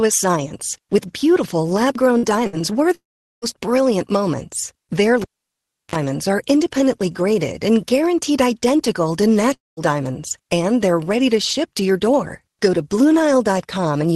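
At 2.17 to 2.26 s, right after "science with beautiful lab", there is a burst of packet loss. About 60 ms of audio never arrives, and the receiver fills a 54 ms gap by continuing the last sound and fading it. A second burst follows at 2.47 to 2.56 s, with a 60 ms fill covering 60 ms of missing audio. Each one sounds like a brief continuation of the last sound that fades, followed by a small jump forward. On a spectrogram, the last sound stretches flat and dim before the pattern resumes abruptly.

From 2.95 to 3.45 s, just before "brilliant moments", there is a long network dropout, likely caused by the stream stalling. About 480 ms of audio is lost. The fill continues the last sound as a decaying tail and then goes silent for about 410 ms. A second dropout, also likely a network stall, runs from 9.54 to 9.80 s. It loses about 240 ms, with about 190 ms of that silent. In the waveform, each shows a short fading tail and then a flat, empty stretch.

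From 5.22 to 5.96 s, just before "are independently graded and", there is the sound of a cable pulled and plugged in. A pop opens about 0.69 s of near silence. Partway through comes a 44 ms burst of 50 Hz mains buzz while the contact is partial, and a second pop marks the return. The waveform shows a spike, a flat line, a brief low-frequency ripple and another spike. On the spectrogram, the pops appear as vertical lines and the buzz as a short band near 50 Hz.

The call codec path is audible throughout in the content stopping near 12 kHz.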